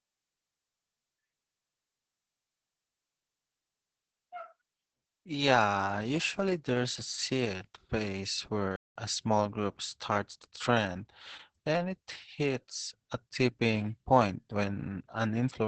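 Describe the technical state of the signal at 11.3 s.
At 11.3 s the speech is passing through Opus voice compression, as it does for the whole clip. The SILK linear-prediction coder is working at a starved bitrate, which fits roughly 10 kbps, so it models the excitation only coarsely and keeps a wideband channel with nothing above about 8 kHz. The result is heavy codec damage: the speech sounds muffled and dull, with a hoarse, slightly robotic edge.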